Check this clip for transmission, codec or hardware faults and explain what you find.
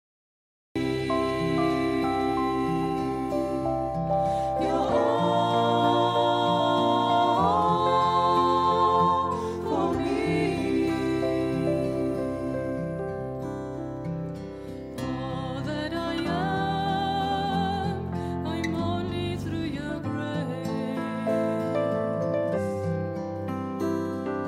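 There is one fault: a cut-off start. The clip opens on digital silence from 0.0 to about 0.76 s. Sound then appears abruptly at 0.76 s, already mid-way through its course. Capture began late, after the sound was under way. So the beginning was never recorded. There is no natural attack and no fade-in. The level jumps straight from nothing to full signal, which gives a hard, clipped-off entry.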